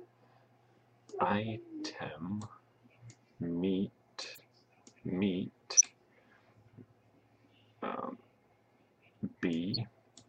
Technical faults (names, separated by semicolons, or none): corrupt frame decoded